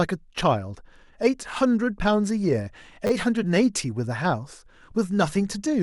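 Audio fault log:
3.07–3.1 s, repeated buffer: a 10 ms slice of speech plays three extra times in succession with hard joins, heard as a brief buzz at about 100 Hz, consistent with a 10 ms buffer replayed while fresh audio was late. Essentially nothing appears lost afterward.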